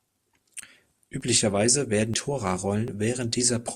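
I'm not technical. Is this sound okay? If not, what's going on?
No. At 1.21, 2.14 and 2.88 seconds the speech jumps forward, as if a tiny piece were snipped out and the ends pushed together. The jump at 2.14 is the biggest, skipping roughly a sixth of a second; the other two lose about a twentieth. This is likely a dropped buffer (overrun): the recording software fell behind, so a small chunk of sound was overwritten before it could be saved.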